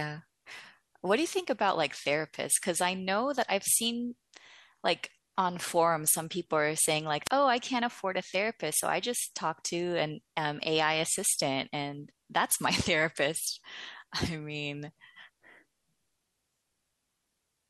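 Wireless microphone squelch dropout at 7.24–7.30 s in this speech: the FM radio signal fades, hiss rises, and the receiver's squelch mutes the output for 24 ms before the voice returns.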